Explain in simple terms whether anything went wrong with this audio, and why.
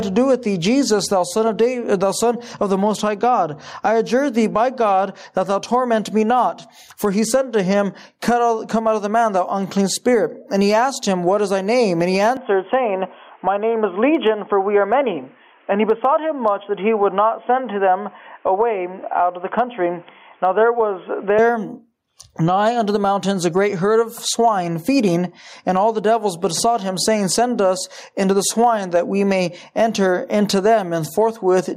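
Two things are wrong with this audio.

The first is gain pumping, and it runs through the whole clip. The level keeps getting pulled down whenever something loud arrives and rising again after, a big up-and-down swing. The likely cause is input gain set far too high, with a fast limiter or compressor yanking the level down on every loud sound. Loud and soft parts end up squashed toward the same level.

The second is an input switched to a poorer device, from 12.37 to 21.39 seconds. In that stretch the sound turns dull and boxy, with nothing above about 3.4 kHz, and a faint new background noise appears. The switch has no gap and no jump in loudness, and the fuller sound returns at 21.39 seconds. The likely explanation is the system swapping to a narrower-band microphone or a headset's call mode partway through, then switching back.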